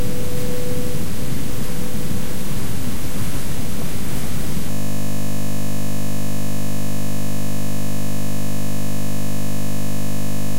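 A system hang loop begins at 4.71 s: the system froze while the hardware kept replaying one 20 ms buffer, so the sound collapses into a steady 50 Hz buzz lasting until the end.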